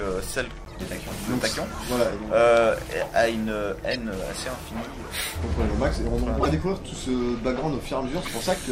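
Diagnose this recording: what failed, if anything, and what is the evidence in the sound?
The codec stage failed: corrupt frames were decoded and played. Short bursts of chirpy noise occur at 0.65–0.76 s, 3.91–3.96 s, 6.40–6.46 s and 8.25–8.30 s. The third burst is the loudest, peaking around -5 dBFS. Damaged bitstream data set wrong gains and spectral codes, so energy lands at the wrong frequencies for a few frames. On a spectrogram each burst shows as a block of misplaced energy with sharp frame-edge boundaries.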